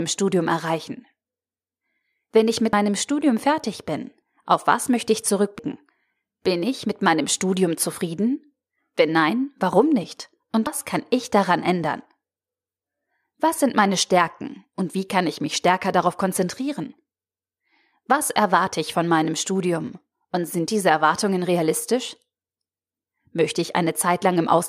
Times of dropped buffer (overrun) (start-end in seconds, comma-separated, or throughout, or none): 2.73, 4.22, 5.59, 10.67